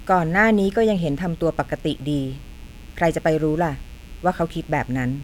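A mains buzz runs under the speech from start to finish. It is based on 60 Hz mains. Sharp switching spikes have leaked into the signal path, twice in each mains cycle. That gives a 120 Hz repetition with a dense stack of harmonics reaching up to several kilohertz. The result is a steady, raspy buzz rather than a smooth hum. It sits roughly 30 dB below the speech.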